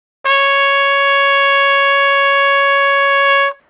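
At 3.6 s, the last 0.09 s of the clip, the low background of these everyday sounds, about 47 dB below the loudest moments, gives way to a steady, featureless hiss. This is comfort noise in place of the background, likely because the sender stopped transmitting during the quiet stretch and the receiver filled the gap with synthetic noise. Unlike a dropout or gate, there is no silence, and the level shifts only about 1 dB. Through the call codec, nothing is heard above 4 kHz.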